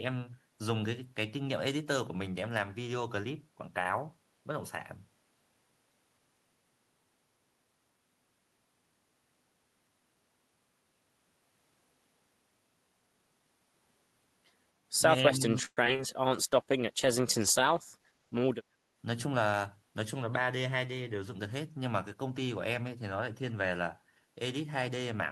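From 15.23 to 15.43 s the speech dips by roughly 10 dB, with about 150 ms of the sound pulled down or thinned. This is most likely speech suppressed in double talk: the echo canceller, faced with both ends active, attenuated the near talker along with the echo.

Between 15.65 and 16.01 s, repeated packet loss gives a choppy, robotic texture. Four gaps fall close together, the longest 114 ms. Each is patched by stretching the preceding sound, so about 43% of the span is synthetic fill, and around 100 ms is simply missing.

A call bitrate drop runs from 16.31 to 18.60 s. The sound becomes coarser and duller, with a rough, watery edge and less high-frequency detail. That fits the encoder being throttled from about 32 kbps to 15 kbps for roughly 2.3 s after the bandwidth estimate fell.

Overlapping the end of that stretch, from 17.97 to 18.59 s, a jitter buffer speed-up plays the speech at about 111% of normal rate while the pitch stays the same. 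Short pitch-period slices totalling around 70 ms are cut to drain excess buffered delay, so delivery sounds hurried.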